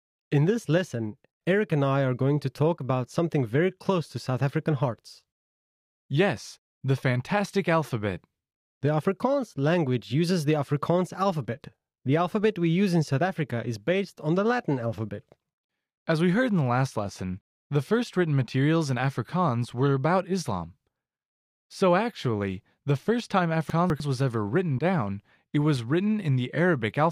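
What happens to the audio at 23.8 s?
Right after "actually the first time", from about 23.7 to 24.0 s, you get chunks out of order: one 100 ms chunk turns up two chunks late and plays after the two that should follow it. Nothing's missing, but that short stretch comes out jumbled, with three hard joins, before "was ever written down" resumes.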